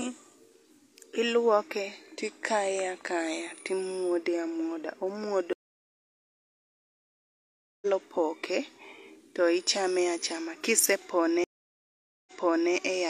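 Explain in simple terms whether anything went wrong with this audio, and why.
Two stream reconnects break up this speech. At 5.53 s the sound cuts out for 2.29 s. It picks up at 7.87 s, roughly two seconds further on, so a stretch is skipped. At 11.44 s it drops again, this time for 0.83 s. When it returns at 12.73 s it has jumped back 0.46 s, so a moment repeats. Each time, the connection broke and the player restarted its decoder partway through the stream.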